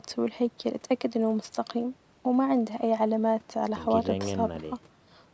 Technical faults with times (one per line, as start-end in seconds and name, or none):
none